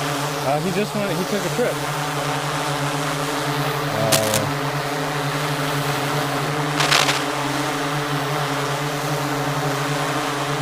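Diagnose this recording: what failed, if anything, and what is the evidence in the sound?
Cable scratch noise appears twice, from 4.12 to 4.41 s and from 6.77 to 7.23 s. Each is a short patch of dense, irregular scratching and rustling laid over the audio, the first roughly as loud as the wanted sound and the second somewhat louder. The failure is likely in the analogue wiring: a worn cable, connector or control being disturbed, so that its contact resistance fluctuates rapidly and injects bursts of noise into the signal path.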